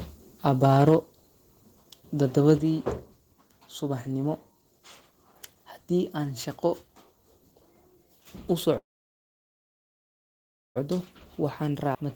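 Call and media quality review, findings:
Microphone overload, 0.64 to 0.95 s: harsh crackle on the loudest syllables, peaks flattened about 2 dB past full scale, under 1% of samples cut. Likely input gain set too high, driving the converter into its ceiling.

Microphone volume stepped down at 0.89 s and 2.58 s: abrupt level drops of about 3 dB, then about 6 dB, voice and background together. First step lands right at the clipped peak. Likely the call software's automatic gain control cutting device input volume.

Call audio freeze, 8.77 to 10.78 s: sound smears into a brief decaying buzz, then nearly 2 s of silence before resuming where it stopped, nothing lost. Likely delayed packets starving the jitter buffer; latency grows by about 2 s.

Jitter buffer speed-up, 11.43 to 12.03 s: hurried delivery at unchanged pitch, running about 7% fast. Receiver trimming short pitch-period chunks, roughly 50 ms total, to drain excess buffered audio after the freeze's backlog.

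Skip ahead, 11.94 to 11.97 s: abrupt jump forward with an 11 ms bridge, roughly 0.7 s of audio gone and both sides spliced almost directly. Audio dropped in transit or by jitter buffer overflow, cutting latency by about 0.7 s.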